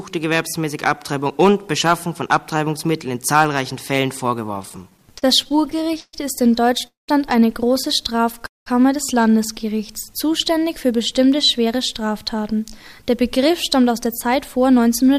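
From 4.55 to 6.15 s the audio goes through repeated stalls (stutter): 19 short interruptions in which the receiver ran out of buffered packets and stretched the last sound to cover the wait. Together they add about 337 ms of filled-in audio, roughly a fifth of that span, with the longest single gap at 130 ms. Nothing is lost, but the passage drags and catches unevenly.

Two call audio freezes follow, at 6.87 to 7.10 s and 8.46 to 8.68 s. In each the sound carries on briefly as a fading continuation and then drops to about 170 ms of silence before resuming where it stopped. The inserted gaps are 211 ms and 198 ms, matching the added playout delay each time. The likely cause is packets held up in transit until the jitter buffer emptied.

From 10.91 s to the end at 15.18 s a jitter buffer speed-up runs the audio at about 106 % of normal rate while keeping its pitch. The receiver, with more audio queued than it aims for, trimmed many pitch-period-sized pieces, about a third of a second in all, to bring latency back down. 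The result sounds slightly hurried and rushed in tempo.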